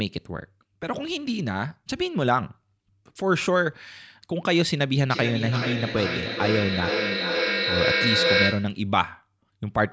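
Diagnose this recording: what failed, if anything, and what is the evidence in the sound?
Feedback echo between two devices, from about 5.11 s to 8.89 s, during call processing. Speech comes back roughly every 400 ms and builds to about 1 dB above the direct sound rather than dying away. A second device's speaker is feeding this microphone, and this end's echo canceller never sees that signal.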